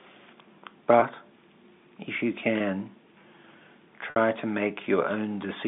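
A brief held, buzzy tone sits at 1.00 s and 2.58 s, and a longer gap from 4.10 to 4.16 s fades into silence before the speech returns with a short cross-fade. This is packet loss with pitch repetition: the receiver filled each gap, about 20 ms, 20 ms and 60 ms, by repeating the last pitch period over the telephone-band G.711 line.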